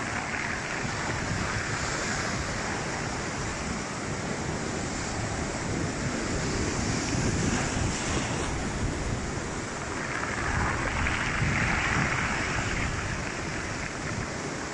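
No technical faults are audible.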